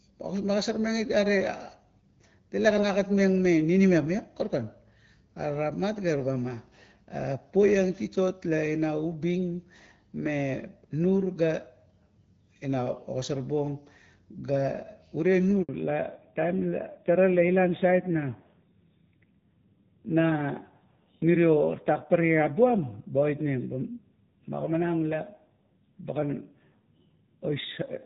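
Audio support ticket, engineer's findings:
Handover gap, 15.63 to 15.69 s. Call switched networks with no speech frames delivered during the transfer. Sound cuts out for 60 ms, then resumes on the new link; the audio in that span is lost.

Fallback to narrowband, 15.69 s to end. Call dropped from the HD Voice wideband path to a legacy narrowband codec. Nothing above 4 kHz after this point, and the sound goes duller and rougher, consistent with AMR-NB around 7.4 kbit/s.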